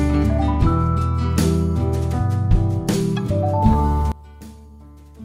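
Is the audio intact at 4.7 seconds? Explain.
No. From 4.12 s to the end at 5.24 s the sound drops by about 21 dB to a faint copy, with the content common to both channels nearly gone. This is likely one channel inverted: one side's polarity is flipped, so material common to both channels cancels when they are summed. On a waveform the amplitude collapses abruptly at 4.12 s; a spectrogram shows the energy sharply faded from that point.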